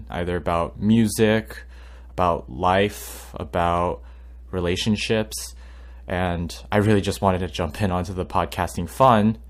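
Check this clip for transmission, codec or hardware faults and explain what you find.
There's one hardware fault here: mains hum running under the speech for the whole clip. It's a steady low tone at 60 Hz, sitting about 20 dB below the speech. What's happening is that the power line is leaking into the signal path, most often through a ground loop or a transformer close to the cabling, which puts that constant buzz-like drone underneath everything.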